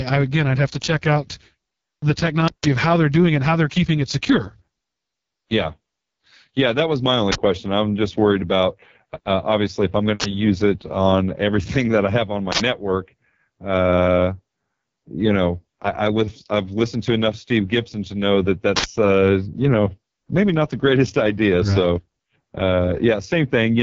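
Uninitialised buffer bursts hit this speech recording at 2.48–2.64 s, 7.32–7.36 s, 10.20–10.24 s, 12.52–12.60 s and 18.76–18.84 s as loud blasts of digital noise lasting 160 ms, 40 ms, 40 ms, 80 ms and 80 ms. Each is a block played out before any audio was written into it, so stale memory contents came through as samples. The AMR wideband (HD Voice) codec damage runs throughout. The speech is rough and raspy, with nothing above 7.2 kHz, which points to the lowest AMR-WB rate of 6.6 kbit/s, where the pulse-excited vocal tract model has too few bits to shape the sound cleanly.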